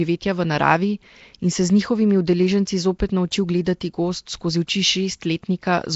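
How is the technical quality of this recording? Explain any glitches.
The quality is poor throughout, with plainly audible compression damage on the speech. For the whole clip, the sound is rough and hissy, with a smeared, underwater blur, which points to likely Nellymoser compression at about 32 kbps. Fixed-size blocks get too few bits, so weak bands are replaced with noise. A spectrogram would show a hard ceiling at 7.7 kHz and grainy noise patches between harmonics.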